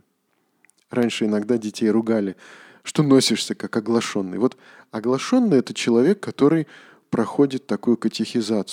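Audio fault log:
1.03–8.04 s, periodic USB or driver dropouts: roughly seven tiny ticks at an even 1.0 s spacing, each where something stalls the USB bus or audio driver and a very short stretch of speech, well under a millisecond, is replaced by silence. The abrupt gap in the waveform gives the click, audible only while speech is present. The strict clock-like regularity separates this from random clicks, crackle or irregular buffer underruns.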